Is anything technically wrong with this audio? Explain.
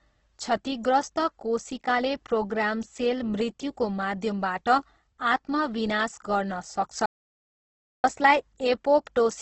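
Yes, there are two faults. Throughout, the speech carries Opus compression: the encoder was likely starved of bits, which fits a rate around 12 kbps in its music-style mode, so bands were filled with folded or noise content and the bandwidth was capped, leaving nothing above 8.1 kHz. The speech sounds heavily rough, grainy and dull.

From 7.06 s to 8.04 s there is an audio dropout to silence, likely from the input being lost while the recording kept writing silence. For almost a full second the sound cuts to silence, with no room tone, and then resumes mid-flow.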